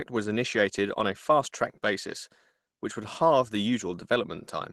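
No technical faults can be heard anywhere in the speech. It has been carried over a call path whose codec trims the top end at about 12 kHz, which fits Opus running at around 20 kbps.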